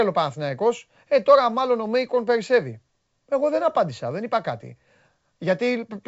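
No technical faults can be heard anywhere in the speech. The audio carries the bandwidth of G.722 wideband telephone coding, with nothing above about 7.7 kHz and at most a faint trace of the coding, which fits its full 64 kbit/s mode.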